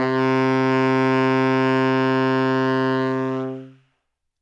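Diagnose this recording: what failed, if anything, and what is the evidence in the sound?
Nothing failed here; no stage shows any fault.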